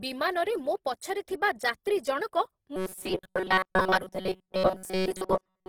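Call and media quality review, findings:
Opus compression, whole clip. Grainy, rough speech; codec damage plainly audible. Bandwidth stays full. Starved bands are filled by folding and noise. Sound points to roughly 16 kbps in CELT music mode, likely cause.

Robotic sound from repeated short buffers, 2.76 s to end. Rigid metallic buzz fixed at 188 Hz. Playback likely starved; the last few milliseconds loop while new audio is skipped. Buzz period fits a buffer of about 5.3 ms. Most of this segment is repeats.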